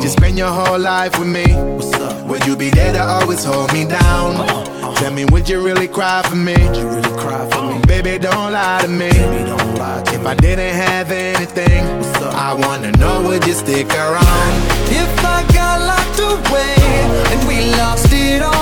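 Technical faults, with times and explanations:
Nothing stood out as a technical problem on careful listening.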